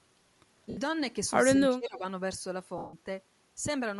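A speech clip with plainly audible coding damage throughout. The upper band sounds grainy and breathy, with noise-like fill where detail should be. That is likely Bluetooth LC3 compression. The texture points to a moderate bitrate, around 48 kbps, with 10 ms frames. At 0.70 to 0.77 s there are lost LE Audio frames. The decoder repeats the last spectrum with scrambled phase, so the sound smears into noise for 70 ms. That fits seven missing 10 ms frames. A longer gap follows at 2.78 to 2.94 s. It lasts 150 ms, long enough for the concealment to fade toward silence. From 1.70 to 2.04 s the voice dips by about 20 dB over roughly a third of a second. This is likely speech suppressed in double talk. An echo canceller heard both sides at once and turned the talker down.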